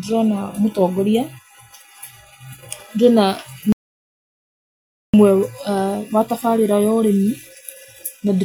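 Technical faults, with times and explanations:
3.72–5.14 s, audio dropout to silence: speech vanishes for 1.41 s with no room tone, a flatline waveform and blank spectrogram, likely from a lost input link.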